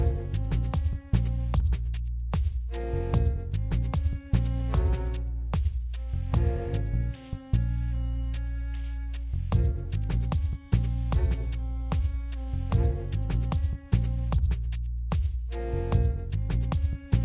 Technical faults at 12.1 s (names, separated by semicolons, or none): none